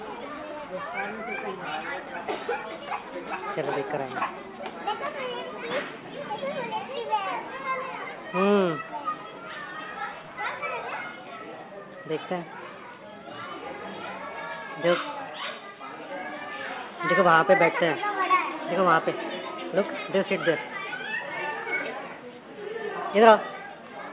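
No technical faults can be heard anywhere in the audio, and the signal stays steady and intact throughout.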